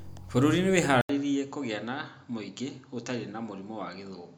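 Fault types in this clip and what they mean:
Input switched to a poorer device: At 1.01 s the sound drops out for 80 ms. It returns duller and boxier, with nothing above 7.6 kHz. It is about 5 dB quieter, over faint new background noise. This is likely a switch to a lesser microphone.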